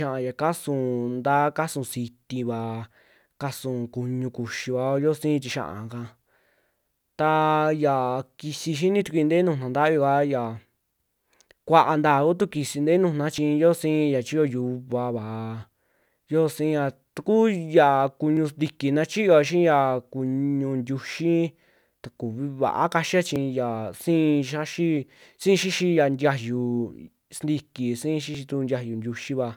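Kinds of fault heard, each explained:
Audio missing between chunks: the recording was likely handled in 5-second chunks, losing a tiny slice at each handover. The speech jumps abruptly, dropping roughly 10 ms with no silence left behind, at 3.41, 13.38, 18.37, 23.36 and 28.35 s.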